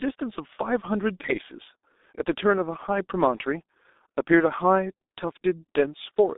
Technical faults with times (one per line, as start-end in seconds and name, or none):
0.00-6.38 G.723.1 codec